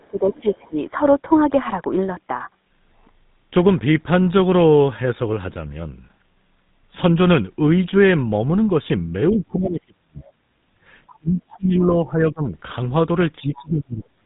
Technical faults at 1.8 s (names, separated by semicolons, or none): GSM full-rate codec